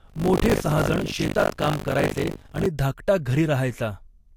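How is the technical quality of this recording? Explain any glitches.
The recording has one fault, confined to the first part of the clip. Buffer tearing runs from 0.00 to 2.66 s, where a 50 Hz robotic buzz rides on the speech. The playback writer and reader have slipped, so roughly a third of each buffer replays audio from about 70 ms earlier.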